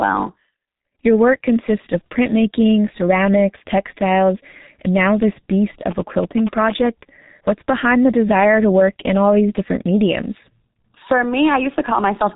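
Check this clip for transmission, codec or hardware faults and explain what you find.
The speech is muffled and hoarse from start to finish, with blurred consonants and nothing above 3.8 kHz, the signature of G.723.1 codec damage, here heavy. This old internet-telephony coder packs the signal into 30 ms frames and rebuilds it from a slowly updated vocal model, so quick articulations smear and breathiness replaces detail. The dull, gritty result points to its low rate of about 6.3 kbit/s.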